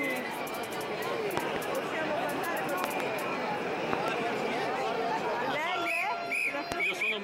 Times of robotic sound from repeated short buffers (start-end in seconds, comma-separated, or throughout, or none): none